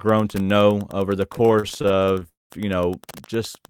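Wi-Fi interference runs through the whole recording. A faint tick repeats every 102.4 ms, about ten per second: a nearby radio's beacon picked up by the audio circuit.

From 1.33 to 2.27 s, after "to know over the", repeated stalls (stutter) set in. Nineteen brief holds, the longest 38 ms, make the speech drag as the jitter buffer kept emptying.

A call audio freeze follows at 2.29 to 2.52 s, just before "you know". The sound hangs, then mostly falls silent, likely because packets were held up in transit.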